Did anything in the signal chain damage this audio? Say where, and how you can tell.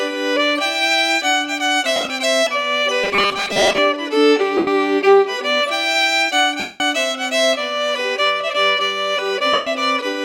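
Yes. Lost LE Audio frames damaged the Bluetooth LE Audio link at 1.96–2.10 s, 4.57–4.67 s, 6.60–6.80 s and 9.53–9.67 s. The first gap is broken up: about 82 ms of audio is missing, scattered across 135 ms, with no single run much longer than 30 ms. The later gaps last about 98 ms, 203 ms and 135 ms. Each one turns tonal content into a hissy smear. The longest one, at 6.60 s, sags in level before the audio comes back. This fits the LC3 decoder covering for missing 7.5 ms frames by reusing the last spectrum with scrambled signs and fading it out as the loss goes on.

From 3.04 to 3.79 s there is robotic sound from repeated short buffers, most likely at the driver or buffer stage. The audio becomes a stiff, metallic buzz pinned at 200 Hz that only loosely tracks the original. A 200 Hz rate points to a 5 ms block being looped while fresh data arrives too slowly. Roughly half of this stretch is repeated material, so the real audio under it is skipped.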